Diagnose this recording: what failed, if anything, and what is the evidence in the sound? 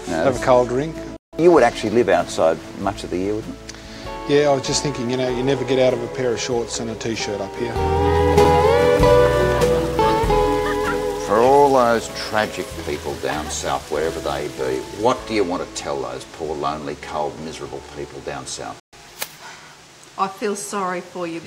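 Digital broadcast dropout, at the reception and decoding stage. The sound fades out over about 3 ms and goes silent from 1.16 to 1.33 s, and again from 18.80 to 18.93 s. Those gaps of about 160 ms and 128 ms fit whole lost frames of roughly 32 ms each, five and then four. The receiver muted while frames were missing or failed their checks, and that part of the programme is gone. The brief fade and the frame-sized lengths set this apart from a buffer underrun.

A block of digital silence sits at 8.45 s, at the driver or buffer stage. It is a hole of about 4 ms with no fade at either edge, so the abrupt drop to silence and the jump back are heard as a tick or dip rather than as silence. The output buffer was most likely not filled in time and zeros went out instead. The hard edges and the very short, non-frame length distinguish it from the muting dropouts.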